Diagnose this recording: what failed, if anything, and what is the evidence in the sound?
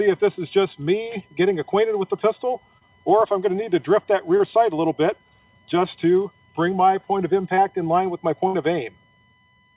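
USB whine is present throughout, entering at the analogue wiring and power stage. There is a steady tone at 1 kHz, strongest at its 2 kHz harmonic, sitting about 40 dB below the signal. Current drawn in 1 ms bus frames is leaking into the audio through the power or ground path.

Short concealed packet loss occurs three times, at 2.78–2.84 s, 4.37–4.42 s and 7.54–7.60 s. Each is a brief smear where about 30 ms of audio never arrived. The receiver extended the preceding sound for 27, 26 and 31 ms respectively, then crossfaded back into the real stream.

A burst of packet loss at the network stage hits at 8.47–8.56 s, removing 60 ms of audio. Concealment continued the last sound for 60 ms and faded it down before playback resumed further on. Nothing above 4 kHz survives the call codec's band limit.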